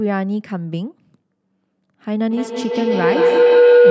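From 2.31 s, a tone near 500 Hz swells to about 10 dB above the speech: feedback howl, a microphone-to-loudspeaker loop gaining level every pass.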